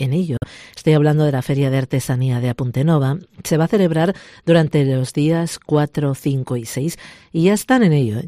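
Bluetooth dropout at 0.37 to 0.44 s: the sound goes silent, likely because packets reached the headphones too late and were dropped, then resumes as if it had played on.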